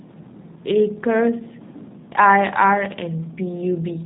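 From start to finish, the speech carries the G.729 codec's sound. Nothing above 4 kHz survives, so it is muffled. The voice is rebuilt from a filter and a few pulses per frame. This leaves a plainly rough, synthetic edge, which fits G.729A at 8 kbit/s.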